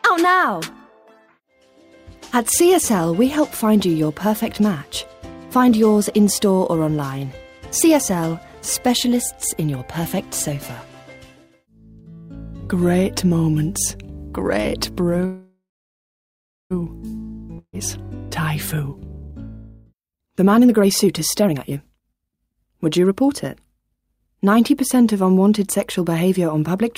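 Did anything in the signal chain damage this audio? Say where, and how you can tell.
Yes, in the network and jitter-buffer stage, in three ways.

Call audio freeze: the likely cause is packets stalling in transit and the jitter buffer running dry at 15.25 s. The receiver extends the last sound as a fading buzz or hiss, which drops to silence for about 1.06 s before the audio resumes at 16.72 s. Nothing is lost. The whole stall, about 1.45 s, is inserted as a gap, and the playback delay grows by the same amount.

Burst of packet loss: at 17.58 to 17.75 s a run of packets is discarded, probably because they were lost or arrived too late to be played. The receiver conceals it for 145 ms by holding and fading the previous sound, with the last 50 ms going silent. The audio then resumes well ahead, with 580 ms of material gone. That jump cuts the accumulated delay by about 435 ms.

Jitter buffer speed-up: the buffer is still holding more than its target, so the receiver removes short pitch-period slices many times in a row. 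From 18.76 to 19.34 s the audio plays at 135% speed, shedding roughly a fifth of a second. From 19.92 to 24.45 s it runs at 118%, dropping about 0.7 s in total. The pitch stays the same but the timing sounds rushed, which marks this as time compression and not resampling.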